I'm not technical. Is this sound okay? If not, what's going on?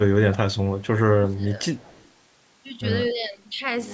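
No. From the start to 0.39 s, and again from 1.11 to 1.59 s, the speech sinks sharply in volume. This is likely speech suppressed in double talk: both sides talked at once, and the call's echo cancelling turned this talker down along with the echo.

At 0.78 to 0.87 s, 1.77 to 2.08 s and around 3.06 to 3.10 s, a faint, delayed copy of the voice trails about 0.16 seconds behind. This is likely echo leak: a speakerphone's microphone picked up the call, and not all of it was removed before being sent back.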